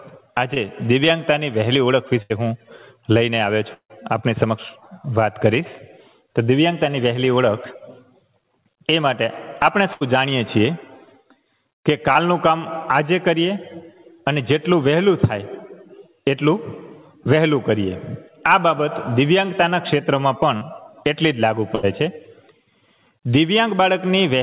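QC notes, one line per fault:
0.54–0.58 s, 12.13–12.17 s, 20.57–20.63 s: short concealed packet loss. About 20 ms of audio is missing at the first two and about 40 ms at the third, each patched by extending the preceding sound and then crossfading back. The result is a tiny smear or wobble. That separates these from the bursts below, where the patch is long enough to be heard fading.
2.22–2.32 s, 9.93–10.03 s, 21.75–21.85 s: burst of packet loss. Roughly 80 ms is missing each time, and the decoder fills it by repeating the last sound. It decays as it goes, so a voiced stretch turns into a short held buzz and an unvoiced one into a fading hiss, and the audio then jumps ahead. The audible decay distinguishes these from the brief smears above, and the absence of any true silence distinguishes them from the event at 3.7 s.
3.74–3.91 s: long network dropout. About 160 ms is missing. Concealment carries the last sound briefly and fades it out, and then about 90 ms of plain silence follows before the audio resumes further on. 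That stretch of real silence after the fade is what sets it apart from the bursts. The likely cause is a stall in delivery rather than scattered packet loss, and the channel is narrowband, with nothing above 4 kHz.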